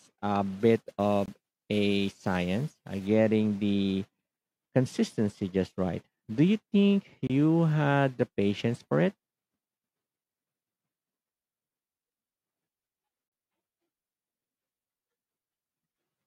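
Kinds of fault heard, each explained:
pre-emphasis left on: a treble boost applied before storage or transmission was never undone by the matching de-emphasis, here following the CD 50/15 µs curve. From 0.60 to 3.07 s the speech turns thin, bright and sibilant, with 10 kHz lifted about 8 dB relative to 1 kHz.
gap between stream segments: consecutive segments are stamped with a small gap between them, and playback fills it with silence, so nothing is lost but time is inserted. Hard-edged holes of about 23 ms at 1.26 s and 26 ms at 7.27 s, six seconds apart, match the segment length.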